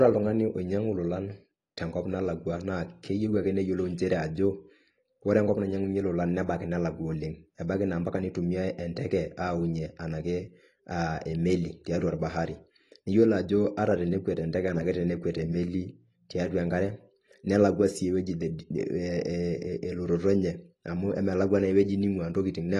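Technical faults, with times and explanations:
Throughout, AAC compression: speech sounds dull and smeared, likely from AAC-LC near 32 kbps; the spectrogram shows a flat ceiling with nothing above 12.1 kHz.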